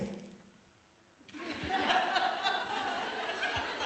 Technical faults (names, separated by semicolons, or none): skip ahead; jitter buffer speed-up